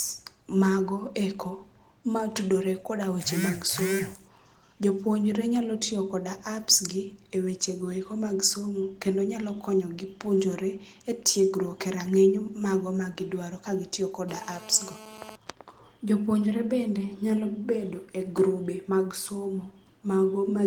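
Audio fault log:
14.29 to 15.36 s, GSM phone buzz: right after "magiduaro kagitiyo" a hard, raspy buzz sits on the speech, about 19 dB below it. That's a nearby 2G phone on a call bursting about 217 times a second, and the audio circuit rectifying those pulses into a harmonic-rich tone. The speech keeps its light Opus coding underneath.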